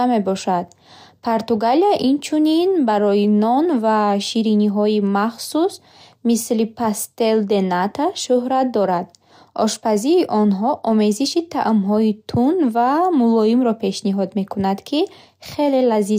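No audible technical faults turn up anywhere in this speech recording.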